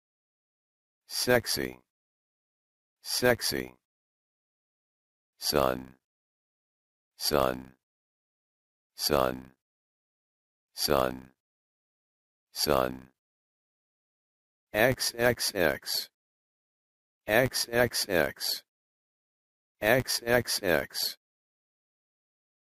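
A filter restarted on every block runs throughout the clip: a filter in the processing chain discards its internal state at each block boundary and begins again from silence, so every block opens with a small transient. Those transients fall at 100 Hz, which points to blocks of about 10 ms, and they blend into a steady buzz that rises and falls with the level of the sound. The buzz sinks with the smooth fade-out from around 21 s to 21.19 s.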